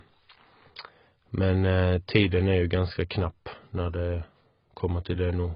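AAC compression runs throughout: the speech sounds dull and smeared, with nothing above 5.1 kHz, likely heavy AAC-LC coding at a bitrate near 16 kbps.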